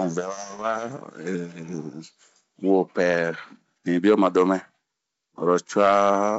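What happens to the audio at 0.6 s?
Around 0.57 to 0.64 s, bit errors on an ADPCM link produce brief pops and a rough, crackly burst with a momentary change in level. Each flipped bit knocks the decoder's step size and predictor off track, so the damage rings on for milliseconds.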